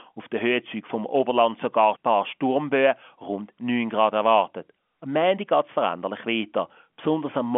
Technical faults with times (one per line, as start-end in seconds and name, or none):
none